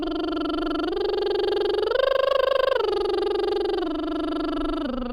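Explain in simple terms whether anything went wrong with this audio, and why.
Nothing went wrong here: the music runs along without any glitch, dropout or other technical fault you'd need to worry about.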